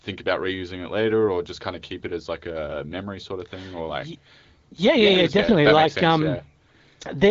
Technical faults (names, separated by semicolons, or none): none